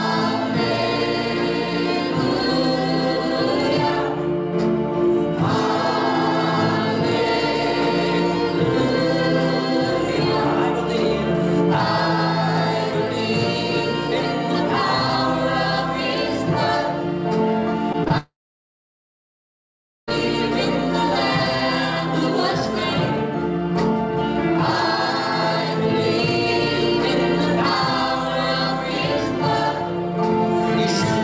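Between 17.92 and 17.96 s, then 18.04 to 18.08 s and 18.08 to 18.12 s, there are three bursts of short concealed packet loss, each about 20 ms of audio that arrived too late to decode. The receiver bridged each gap by extending the preceding sound and crossfading back into real audio, so these instants come through as quick smears or wobbles, and a brief transient inside them can disappear. The last two gaps run back to back, forming one slightly longer blur.

At 18.18 s a long network dropout begins, lasting until 20.09 s, most likely a stall in packet delivery. For the first moments the sound is stretched into a decaying buzz or hiss. That fades, and about 1.7 s of near-silence follows before audio resumes mid-flow, with the missing stretch simply gone. On this call path the bandwidth stops at 8 kHz, which fits a G.722 wideband codec.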